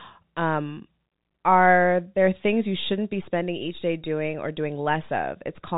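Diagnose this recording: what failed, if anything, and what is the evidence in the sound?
Nothing failed; this is ordinary G.711 telephone speech.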